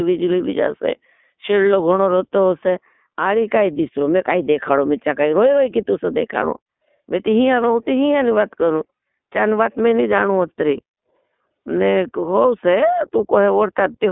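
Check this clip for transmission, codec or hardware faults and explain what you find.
The clip carries one codec fault that runs from start to finish: iLBC codec coding. The speech is squeezed into a narrowband telephone line of about 200 Hz to 3.6 kHz. iLBC codes the excitation of each frame independently of the previous one, and here the frames are 20 ms long. The roughness fits the 15.2 kbps mode, and the coding damage is plainly audible as a gritty, slightly synthetic edge on the voice. On a spectrogram, energy stops sharply at 3.6 kHz with an empty band above, and the harmonics look smeared in short blocks. The call's microphone processing took out the lowest bass with its high-pass filter, which is normal and not a fault.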